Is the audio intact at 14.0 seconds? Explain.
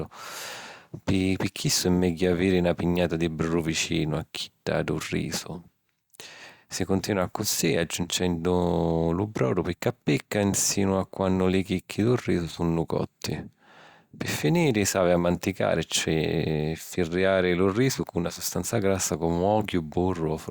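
Yes, at 14.0 seconds the speech plays through cleanly, with no dropout, click, distortion or other fault to be heard at that moment.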